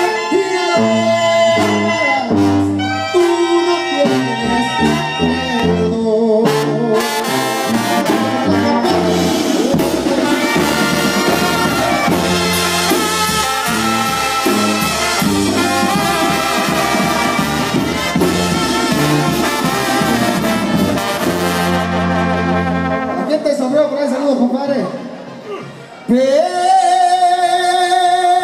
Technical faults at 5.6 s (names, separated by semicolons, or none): dropped buffer (overrun)